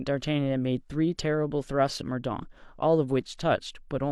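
Speech recording, with nothing technically wrong to report and so no times or causes to give.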